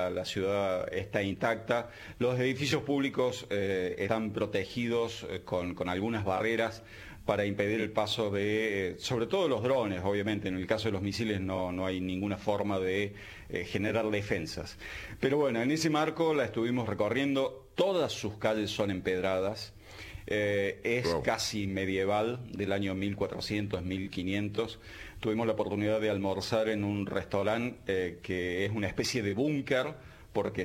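At 6.37 s the decoder lost a single compressed frame, either because it was missing from the stream or because it was rejected as damaged, so the compressed frames were skipped rather than played. The frame length is 46.4 ms. The sound jumps forward by roughly a twentieth of a second, ending at 6.41 s.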